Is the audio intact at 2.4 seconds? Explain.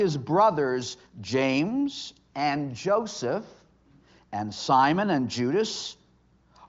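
Yes, at 2.4 seconds the audio is intact, with no fault to be heard at that moment.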